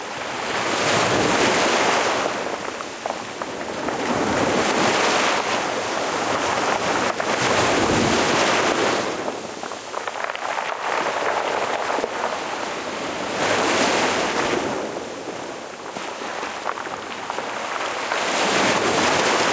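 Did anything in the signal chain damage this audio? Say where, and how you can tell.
Yes, there's gain pumping across the whole clip. The gain swings by roughly 5 dB, so loud and soft parts end up squashed close together. The likely cause is input gain set far too hot for the microphone, with a fast limiter or compressor clamping down on every peak. The band topping out around 8 kHz is just that call path.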